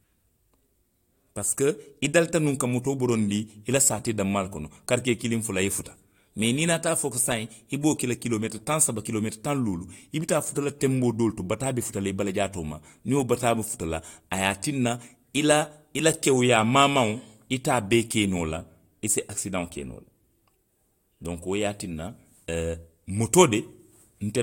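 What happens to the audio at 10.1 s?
Nothing goes wrong at 10.1 s: the speech carries on without any dropout, click, glitch or other audible fault at that point.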